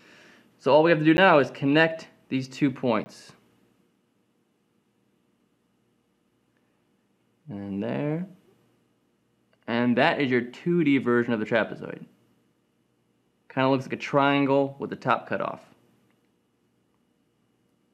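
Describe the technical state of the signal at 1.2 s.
Right around there, at 1.17 s, there's a block of digital silence: roughly 10 ms where the signal drops straight to silence and then jumps back. Because there's no fade on either side, both edges produce a discontinuity, and with a gap that short it comes across as a tick or dip rather than an audible hole. That kind of dropout points to the output buffer not getting filled in time.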